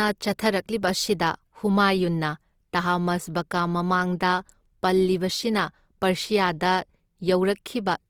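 Throughout the speech, a low bitrate likely forced Opus compression in its music (CELT) mode to fill bands with folded or noise content, which fits about 24 kbps. Bandwidth reaches about 20.2 kHz, but the speech sounds plainly grainy, rough and noisy.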